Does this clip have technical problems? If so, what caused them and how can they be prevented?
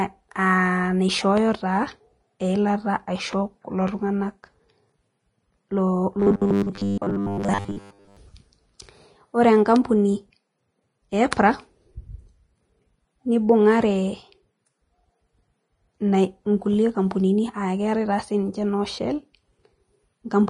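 Yes. Vorbis compression, throughout the 20-second speech clip, likely causes a hissy, grainy sound. The encoder has cut the treble and quantised what remains so coarsely that detail turns to noise, which fits a low bitrate around 28 kbps. Encoding at a higher Vorbis quality setting would prevent this.

Robotic sound from repeated short buffers, from 6.20 to 8.17 s, gives a rigid, metallic buzz at 100 Hz. Its likely cause is a 10 ms block being replayed whenever new audio arrives late, so most of this stretch is repeats rather than real sound. Larger buffers or a faster, steadier delivery path would prevent it.

Pre-echo at 11.31 s is a brief hiss, about 11 ms long, smeared just ahead of a sharp attack. The codec spread noise meant for the loud onset across the whole transform block, including the quiet moment before it. A higher bitrate or better block switching would prevent this.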